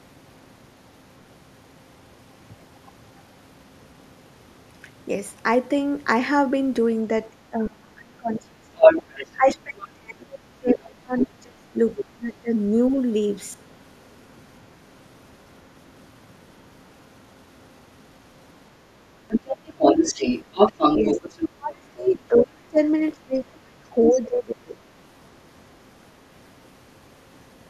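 Speech recording with two echo-control faults, both concentrated in stretches where the near talker and the far end overlap. Speech suppressed in double talk appears from 7.31 to 12.97 s and again from 21.14 to 24.77 s. The talker's level dips, by as much as about 30 dB at the deepest, for roughly four seconds in total across the first stretch and roughly three in the second. The likely cause is an echo canceller that could not tell the local talker from the loudspeaker echo while both were active, so it attenuated everything. The other side's voice leaking through is heard at 8.79–9.88 s, 10.66–11.26 s, 11.98–12.02 s, 19.29–21.49 s, 22.05–22.44 s and 24.07–24.21 s. Its level runs from about 10 dB louder than the talker in the first fragment, to roughly equal at 19.29–21.49 s, to about 5 to 10 dB below elsewhere. This points to the far-end playback reaching the microphone and not being fully cancelled, likely because of residual echo that the canceller missed.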